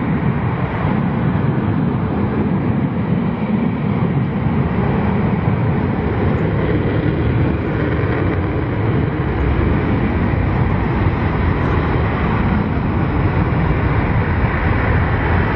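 No technical faults can be heard anywhere in the audio.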